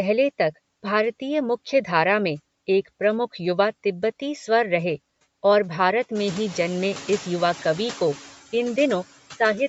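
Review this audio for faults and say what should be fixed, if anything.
Noise suppressor artifacts run through the whole clip. The suppressor pulls steady noise down by about 15 dB between phrases and lets it back up under speech. When the room noise rises around 6 s, the pumping gets easier to hear. Prevention: lower the suppressor's depth or fix the noisy room so the processing has less to remove.

Grainy, breathy damage also runs throughout, likely from Bluetooth LC3 compression. The texture points to 10 ms frames at about 48 kbps. The codec thins the upper band and fills it with noise. Nothing remains above 8 kHz. Prevention: use a higher LC3 bitrate or a wired microphone path.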